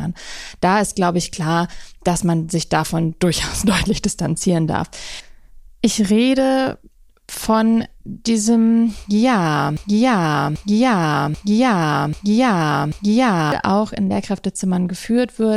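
At 9.77 s the speech locks into a broken-record loop. A fragment of about 0.79 s plays, then plays again, identical each time. It repeats five times, back to back, until 13.52 s. The cause is likely a stall in the player, encoder or stream, which kept resending the last piece it held. Normal playback does not resume until 13.52 s. The speech that belonged in those 3.75 s is gone.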